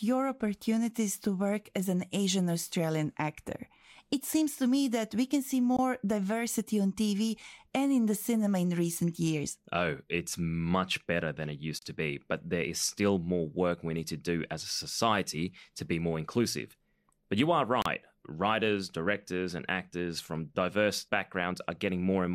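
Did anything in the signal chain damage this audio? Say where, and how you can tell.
Yes, at the codec join stage: gaps at joins of encoded pieces, brief silences at 5.77, 11.79 and 17.82 s, 20 to 34 ms, every 6 s, from untrimmed encoder delay and padding.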